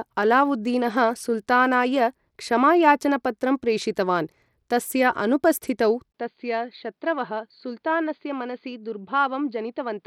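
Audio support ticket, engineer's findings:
Bluetooth SBC compression, whole clip. Probable component: the Bluetooth link, likely SBC coding at a starved bit budget, which fits roughly 96 kbps. Simple sub-band allocation leaves the weak upper bands with few or no bits and coarsely quantises the rest. Result: plainly audible damage, with treble that thins and flickers, and gritty quantisation noise and aliasing riding on the speech from start to end.

Input switched to a poorer device, 6.12 s to end, right after "क्षमायाचनपत्रं प्रेषितवान् तस्य अनुपस्थितौ". Probable component: capture path, likely a handover to another microphone or a headset call profile. Brief 20 ms dropout at the switch. After it the band stops at 4.7 kHz, so the speech turns dull and boxy. Level falls by a few dB, and a new faint noise floor appears, far below the speech.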